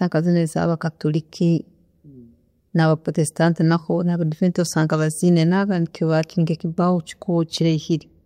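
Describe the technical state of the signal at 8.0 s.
At 8.0 s the speech signal is intact, with no dropout, clipping, distortion or other fault to be heard at that moment.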